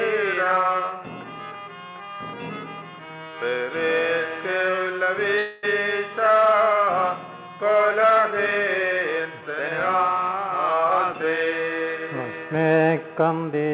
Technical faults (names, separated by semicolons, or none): call audio freeze; jitter buffer speed-up